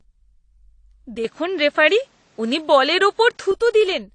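From the start, the whole speech clip has nothing above 10.2 kHz. Two kinds of coding grit are heard layered together. That points to transcoding between lossy codecs, likely an MP3 stage near 49 kbit/s followed by AAC-LC near 32 kbit/s. The second encoder spends its bits on the first one's artefacts and adds its own. The lower cut-off survives.

At 1.25 s the sound turns duller and boxier, with no gap at the change. The band now stops at 8.6 kHz. Level shifts by about 5 dB. A faint new background noise appears, far below the speech. This is an input switched to a poorer device, likely a change to another microphone or a headset's call profile. At 3.52 s the fuller sound returns.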